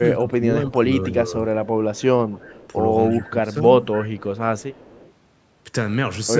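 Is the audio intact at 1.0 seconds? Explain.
No. From 0.0 to 1.35 s the echo canceller likely could not tell the near talker from loudspeaker echo during double talk and turned both down. This is speech suppressed in double talk: the speech dips by about 10 dB and thins or breaks up, roughly 400 ms in total.

Just after, from 1.04 to 1.12 s, an echo leak likely let loudspeaker pickup slip past the far end's canceller. A faint copy of the speech returns about 279 ms late, around 25 dB below the speech, as a brief scrap.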